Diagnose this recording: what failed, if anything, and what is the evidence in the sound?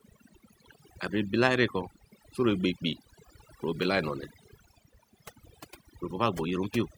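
The failure is overdone noise removal, at the processing stage, across the whole speech recording. The background drops, breaking up into twinkling specks. The reducer was set too hard. It gated out frequency bands near its noise estimate, taking quieter parts of the voice too.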